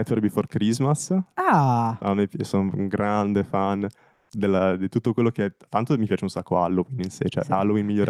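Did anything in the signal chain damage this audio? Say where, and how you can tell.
Yes, at the codec: from 4.13 to 4.29 s the background becomes flat, featureless comfort noise, shifting about 7 dB in level, likely from Opus DTX.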